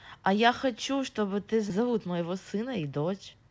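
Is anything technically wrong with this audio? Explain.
Yes. At 1.70 to 1.72 s there is a skip ahead: roughly 0.7 s of speech was dropped and never filled, so the sound on either side is spliced together almost directly. From 1.80 to 3.50 s a jitter buffer speed-up removes short pitch-period pieces, about 150 ms in total, so the speech runs at 110% speed with unchanged pitch and sounds hurried. Throughout, the call codec passes nothing above 8 kHz, which fits G.722.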